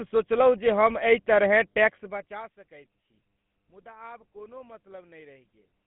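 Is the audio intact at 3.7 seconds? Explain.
No. Mains hum runs through the whole clip, 3.7 s included. A ground loop or nearby transformer is leaking the 50 Hz power line into the signal path, so a steady low tone sits under the speech at 50 Hz with a few low harmonics above it. It is faint, far below the speech level, but it never stops. It is clearest in pauses, where it carries on unchanged beneath the silence.

GSM full-rate codec damage is also present at 3.7 s and across the entire clip. The speech has been squeezed through the original GSM coder, which fits a 13 kbps stream. It models the vocal tract as a filter and excites it with regularly spaced pulses built from only every third sample, so the voice comes out buzzy and gravelly. The band is telephone-narrow, about 150 Hz to 3.5 kHz, with nothing above 3.8 kHz, which makes it sound muffled and thin.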